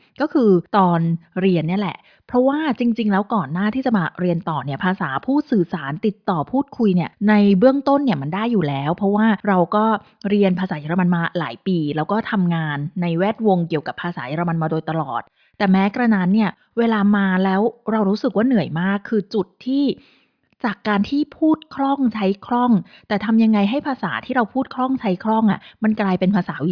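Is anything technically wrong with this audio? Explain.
No, nothing technically wrong can be heard anywhere in this speech recording.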